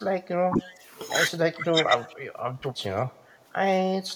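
Between 0.31 and 0.84 s, again from 1.46 to 1.9 s, and from 2.43 to 3.04 s, the speech keeps dipping in short chunks, by around 10 dB in the first stretch and closer to 15 dB in the later two. That's likely speech suppressed in double talk, with the canceller ducking the talker because the far end was talking at the same time.

Tucked inside that first dip, from 0.63 to 0.73 s, there's a faint delayed copy of the voice sitting roughly 25 dB down, trailing by 232 ms. It's likely an echo leak, where a speakerphone's canceller let some of its own pickup slip back into the line.

At 2.09 to 2.13 s the room tone drops by about 6 dB for a brief moment and then comes straight back. That's background gated by the echo canceller, which clamped the mic down hard for an instant while the loudspeaker was playing.

From 3.18 to 4.08 s the level falls abruptly by about 6 dB and stays down. That's the classic signature of one channel dropping out before the mono sum, likely a lost stereo channel.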